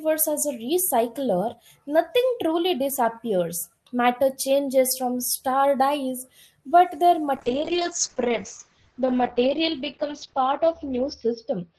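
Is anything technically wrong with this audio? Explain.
Yes. A call bitrate drop starts at 7.37 s, just after "star dies but their", and lasts to the end. The encoder got far fewer bits, which fits a fall from 32 to 8 kbps. Bandwidth shrinks from 20 kHz to 6 kHz, so the speech turns muffled and rough.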